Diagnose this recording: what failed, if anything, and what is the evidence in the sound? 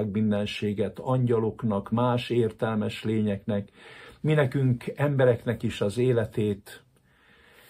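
Nothing failed; no stage in the chain leaves any audible trace anywhere in the recording.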